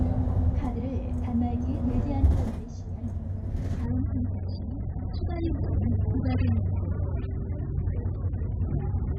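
At 3.86 s the audio switches abruptly, with no gap, to an adaptive stream at a lower bitrate. Everything above about 5.1 kHz vanishes and swirly codec artefacts appear through to the end, consistent with a step down from roughly 96 to 8 kbit/s AAC. Unlike a dropout, nothing goes silent.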